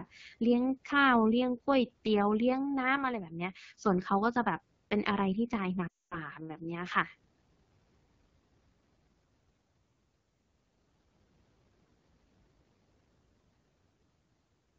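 The whole recording passes through the AMR wideband (HD Voice) codec. Damage is plainly audible. The speech sounds rough and raspy. This fits a low AMR-WB mode near 8.85 kbit/s. Detail above 6.4 kHz is only shaped noise.

From 5.88 to 6.19 s there are lost AMR speech frames. The decoder repeats its last good settings with falling gain. The sound quickly drops to near silence. A gap of about 240 ms fits roughly twelve missing frames.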